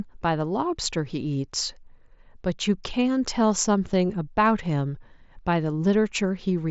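Nothing stood out on listening to this speech clip.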